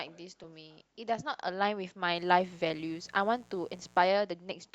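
At 0.43 s, compressed frames are skipped: about one 20 ms frame of speech is missing, so the sound jumps ahead. From 2.15 to 4.09 s, a mains buzz sits around 30 dB below the speech. Switching spikes on a 60 Hz supply produce harmonics reaching into the kilohertz range, so it sounds raspy rather than like a smooth low hum.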